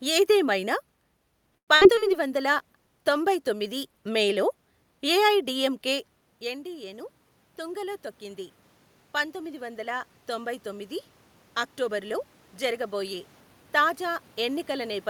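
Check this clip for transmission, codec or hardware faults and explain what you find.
Several transmission faults cluster in the first four seconds of this speech clip, followed by two gain-control swells and a jitter buffer speed-up near the end.

From 1.57 to 1.70 s there is a call audio freeze. The most likely cause is packets held up in transit until the jitter buffer ran dry. The receiver stretched the last sound into a brief fading buzz or hiss, then went quiet for about 90 ms. When the packets arrived, the speech resumed where it had stopped. About 103 ms of gap was inserted and nothing was lost, so the rest of the call is delayed by that amount.

A burst of packet loss follows at 1.76 to 1.83 s. About 60 ms of audio never arrived in time to be played. The receiver extended the preceding sound for roughly 54 ms, fading it as the gap went on, which gives a short held buzz or hiss. 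The speech then picks up further along, and the stretch in between is simply gone.

At 1.95 to 1.99 s there is a short concealed packet loss. Around 20 ms failed to reach the decoder. The concealment continued the previous sound, pitched or noise-like, and crossfaded back into the real signal. The result is a momentary smear or wobble, brief enough that a small consonant can disappear into it.

A call bitrate drop runs from 2.06 to 3.99 s. The bandwidth estimate fell and the encoder was pushed from 64 kbps down to 27 kbps, holding at the lowest rate for about 1.9 s. With fewer bits, Opus quantises more coarsely and trims upper frequencies. The speech turns duller and rough or watery until the rate recovers.

Automatic gain rising occurs twice, from 6.40 to 8.50 s and from 9.13 to 10.97 s. The first follows a drop in level of about 14 dB as the talker moves away from the microphone around 6 s. 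Each time, the gain control judged the input too quiet and raised its gain by about 3 dB over roughly two seconds. Voice and room noise swell up together as it does so.

Between 11.59 and 12.74 s there is a jitter buffer speed-up. The buffer held more audio than its target, so the receiver removed short pitch-period segments repeatedly, cutting around a tenth of a second in total. Playback runs at about 107 % speed with the pitch unchanged, and the speech sounds slightly hurried through that passage.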